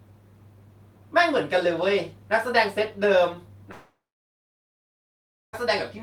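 At 3.71 s the speech becomes a fading buzz, then near-silence until 5.55 s, a blank band on waveform and spectrogram; likely a long network dropout.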